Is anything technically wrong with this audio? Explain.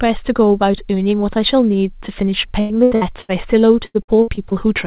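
Yes. Repeated packet loss (robotic sound) hits this speech twice: from 2.6 to 3.31 s, and from 3.87 to 4.53 s. The first stretch has four gaps, the longest 95 ms, with 43% of it patched. The second has five gaps, the longest 77 ms, with 34% patched. Packets kept arriving late or not at all. Each hole was filled by stretching the last sound, and the next hole soon followed. The speech turns choppy and robotic, with pieces missing. The band stops at 4 kHz, which fits a narrowband G.711 call path.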